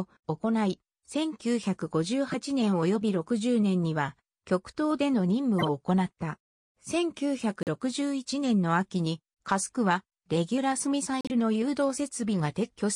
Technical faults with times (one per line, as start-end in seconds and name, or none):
2.31-2.34 corrupt frame decoded
5.58-5.64 corrupt frame decoded
7.63-7.68 corrupt frame decoded
11.21-11.32 corrupt frame decoded